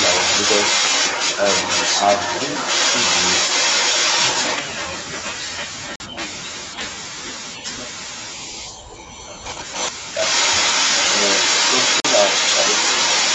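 From 0 to 4.62 s a delayed copy of the speech trails it by 412 ms, somewhat louder than the original. This echo leak likely comes from a loudspeaker whose echo canceller let its microphone pick-up pass back into the call.

From 4.74 to 9.43 s the speech sinks and breaks up, at its worst falling by roughly 40 dB, over about five seconds in total. This is speech suppressed in double talk, likely caused by the echo canceller mistaking the talker for loudspeaker echo while both sides spoke, and turning everything down.

Within that stretch, at 5.96 to 6.00 s, a 44 ms hole cuts in. This gap between chunks recurs at 12.00 to 12.05 s, about 6 s later. That spacing points to audio delivered in 6-second chunks, with silence left at each join.

From 9.44 to 9.91 s the 412 ms echo leak returns at about the same level as the speech, likely again from the loudspeaker pick-up getting past the canceller. 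From 9.91 to 10.15 s the speech drops out briefly for about 200 ms, likely the double-talk suppression clamping down once more. From 10.15 s to the end the delayed copy is back, somewhat louder than the speech, and the likely cause is the same uncancelled loudspeaker echo.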